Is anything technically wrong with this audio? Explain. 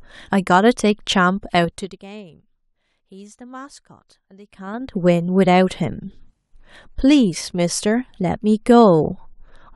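Yes. Zipper noise appears from 1.62 to 2.02 s, as the speech drops by about 25 dB, and from 4.44 to 4.96 s, as it rises back. Gain jumps in unsmoothed 3 dB steps, around fifteen to twenty a second, and each step clicks, so a rapid ticking rides on the speech.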